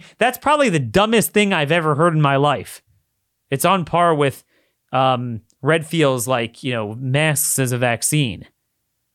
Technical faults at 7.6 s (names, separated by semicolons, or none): none